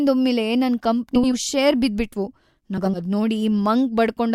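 Around 1.15 to 1.34 s, and again from 2.77 to 3.00 s, you get frames out of order. Two adjacent chunks of roughly 80 ms got swapped, which fits runs of four 20 ms frames. The speech flutters and garbles, though nothing actually goes missing.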